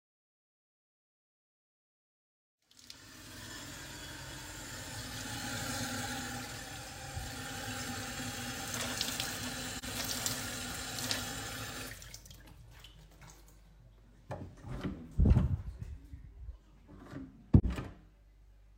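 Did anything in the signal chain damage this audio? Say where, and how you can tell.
Yes. Two brief soft-edged dropouts, at 9.78 to 9.84 s and 17.59 to 17.65 s: AAC frame loss with muting in the codec stage. Each single lost frame, about 43 ms, was zeroed by the decoder and faded by its overlapping windows.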